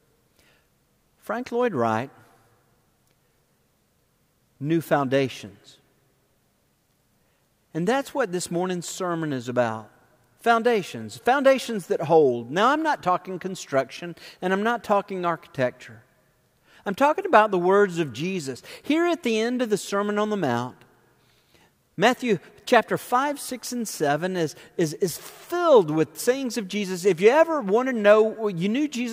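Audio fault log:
No fault can be heard anywhere in the clip. There is nothing to log against any time.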